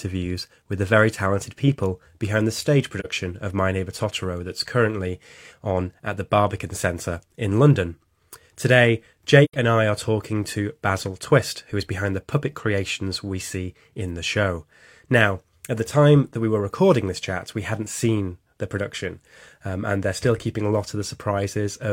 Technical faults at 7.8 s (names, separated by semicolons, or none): none